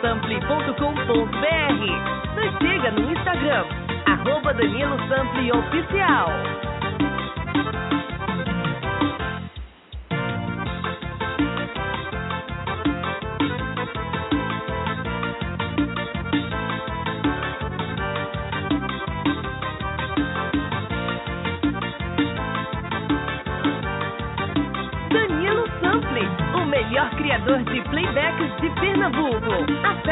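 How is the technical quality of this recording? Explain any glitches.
No glitches are audible anywhere in the recording, so there is nothing to explain.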